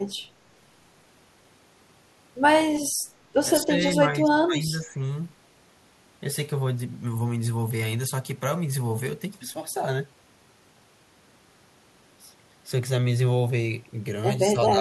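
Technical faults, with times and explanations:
3.61–5.03 s and 14.53–14.81 s, speech suppressed in double talk: in the first stretch the speech dips and thins in patches adding up to about a second, falling by as much as about 15 dB; at the very end a shallower dip of about 5 dB lasts roughly 0.2 s. This is likely an echo canceller that, with both sides talking at once, couldn't separate this talker from its loudspeaker echo and turned both down.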